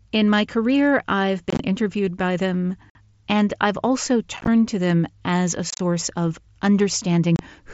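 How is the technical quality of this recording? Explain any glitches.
Five short dropouts break up the speech, heard over the light graininess and 8 kHz ceiling of the mSBC headset link. The unconcealed Bluetooth headset packet loss occurs at 1.50–1.60, 2.90–2.95, 4.37–4.48, 5.70–5.80 and 7.36–7.39 s. Lost headset packets are replaced with silence or an idle pattern, leaving abrupt holes. Unlike a smoothed, concealed dropout, these have hard edges, and the scattered gaps sound rough and chopped.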